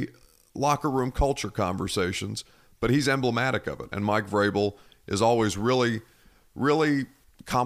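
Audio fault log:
No fault is heard in this speech clip.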